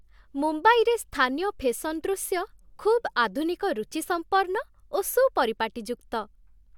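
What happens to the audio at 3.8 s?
Nothing goes wrong at 3.8 s: the speech runs on without any dropout, click, distortion or other audible fault at that point.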